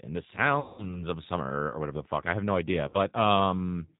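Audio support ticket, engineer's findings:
G.729 codec throughout: speech band-limited with nothing above 4 kHz, rough and a bit synthetic, codec damage plainly audible. Sounds like the G.729A variant at 8 kbit/s, rebuilding each 10 ms frame from a vocal tract filter, pitch predictor and a few pulses.

VoIP packet loss concealed by the speech codec, 0.60–1.05 s: about 180 ms of sound missing, fits roughly nine 20 ms packets. Decoder stretched the last pitch and filter into a fading buzz or coloured noise, still weak and smeared up to "of summer or whatever".

Second concealment, 2.88–2.97 s, right after "I have no idea": about 60 ms gone, around three packets' worth. Same extrapolated, decaying buzzy tone or coloured noise while the decoder recovers frame by frame.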